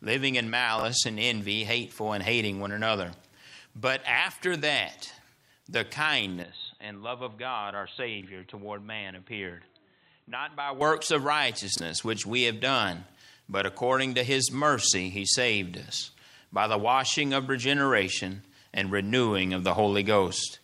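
At 0.79 to 0.83 s, chunks out of order: one 21.33 ms block plays a chunk late, after its successor, giving a brief jumbled flick. The waveform shows abrupt discontinuities, and the spectrogram shows thin vertical lines at the joins.

From 6.43 to 10.81 s, the sound turns dull and boxy, with nothing above 4.1 kHz, a drop of roughly 10 dB and a faint new noise floor. This is likely an input switched to a poorer device. The spectrogram shows a flat ceiling, and the waveform shows a narrower envelope.

The same chunk reordering recurs at 8.21 to 8.26 s and 11.76 to 11.80 s.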